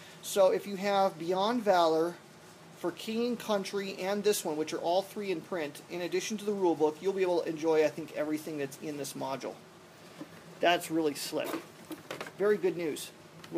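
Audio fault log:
No technical faults can be heard anywhere in the signal, which stays steady and intact from its opening to its final moment.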